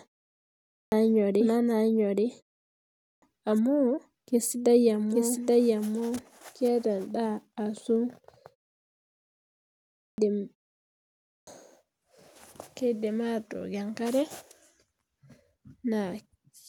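From the very start until 6.68 s, every sound is followed about 0.7 s later by a second, equally loud copy with no reverb tail, then the copy cuts off abruptly. This doubled audio track is likely a second, slower capture path mixed in alongside the first.

Clipped starts after pauses come at 0.42, 2.64, 9.68 and 10.89 s. Sound bursts out of silence with its opening missing: about 0.50, 0.58, 0.50 and 0.58 s swallowed. In the silences the output device sleeps, and it wakes too slowly to catch those first sounds.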